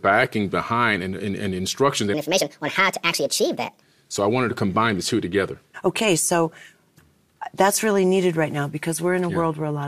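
Right after "and and and instructions", from 2.14 s to 3.82 s, the speech abruptly turns high and hurried, then drops back to its normal pitch and pace. This is a section at the wrong speed: that stretch runs at 1.49 times its recorded rate, which lifts the pitch by roughly seven semitones while compressing timing by the same factor. The likely cause is a clock mismatch during editing or playback, where that segment was resampled against the wrong rate.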